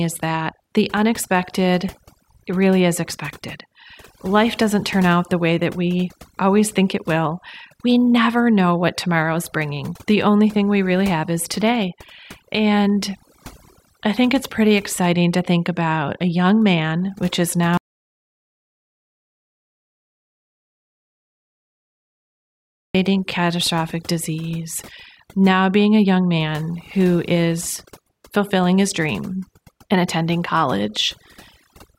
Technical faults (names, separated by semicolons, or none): overdone noise removal; audio dropout to silence